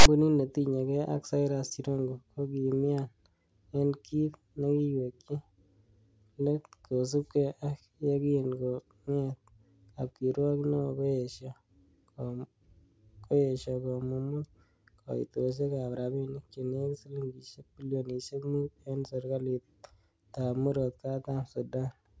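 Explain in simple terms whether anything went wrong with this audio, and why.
Right at the start, 0 to 0.06 s, there's a harsh rasp: file tags played as audio. The player read stored text tags as if they were sound.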